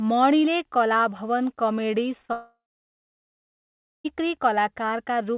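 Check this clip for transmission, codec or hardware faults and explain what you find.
Two faults are present, both just after "मणिले कलाभवन कमेडी", on speech carried over a narrowband call path whose audio stops at 4 kHz, which fits G.711 mu-law at 64 kbps.

Short concealed packet loss, 2.22–2.25 s and 2.25–2.31 s: packets covering about 20 ms and then 40 ms arrived too late, so the decoder extended the preceding sound to bridge each hole before rejoining real audio. The result is a quick smear and wobble.

Long network dropout, 2.33–4.06 s: audio stops arriving for about 1.7 s, most likely because the network delivered nothing. The last sound trails briefly, then roughly 1.45 s of silence follows before speech resumes further along, without the lost section.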